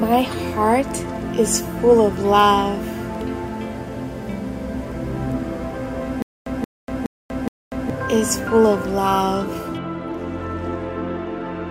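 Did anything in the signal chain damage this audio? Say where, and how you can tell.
Yes. From about 6.22 s to 7.90 s there is a stutter with silent gaps: a fragment roughly 178 ms long plays four times at an even 419 ms spacing, each repeat followed by about 241 ms of digital silence. That pattern points to the playback or streaming stage, most likely a stalled buffer re-emitting its last block on each retry before running dry. Whatever audio belonged in that stretch never arrives and is simply lost.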